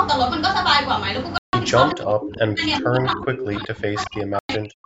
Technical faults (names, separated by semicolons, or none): Bluetooth stall; speech suppressed in double talk